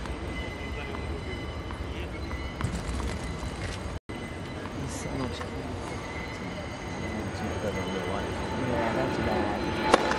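A resampler restarted on every block runs throughout. Each 40 ms block from 24 kHz to 48 kHz misses its neighbours, leaving a 25 Hz buzz under the sound.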